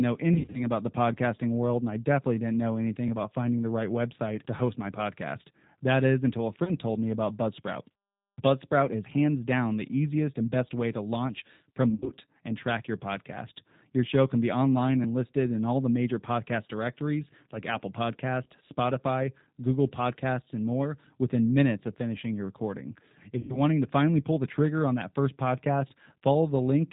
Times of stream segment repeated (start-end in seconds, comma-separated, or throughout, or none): none